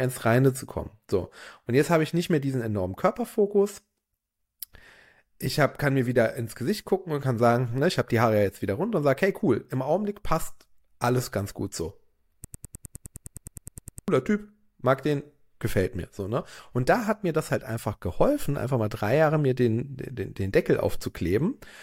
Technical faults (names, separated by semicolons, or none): broken-record loop